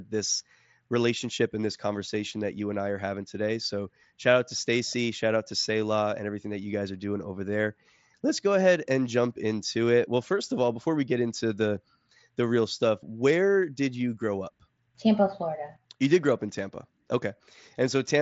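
No technical faults can be heard in this recording.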